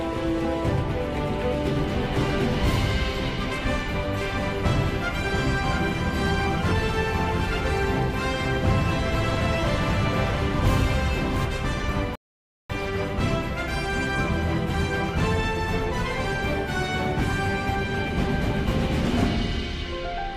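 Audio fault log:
4.21–11.45 s, doubled audio track: a full-band copy about 5 dB quieter trails by roughly 0.7 s, starting and stopping abruptly, likely from a second capture path or misaligned edit.
12.15–12.70 s, rebuffering stall: playback cuts to silence for 0.54 s, then resumes exactly where it stopped, as the player waited for more downloaded audio.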